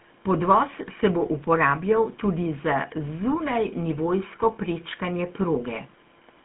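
From start to finish the speech has a buzzy, gravelly roughness, plainly audible, with a hollow, boxed-in tone and no air or sibilant sparkle: the band runs only from about 150 Hz to 3.4 kHz, and nothing at all sounds above 3.7 kHz. This is the GSM full-rate codec, which fits its 13 kbps mode. It rebuilds the voice from a vocal-tract model fed by a coarse, regularly spaced pulse excitation, and that sparse excitation is what leaves the grainy buzz.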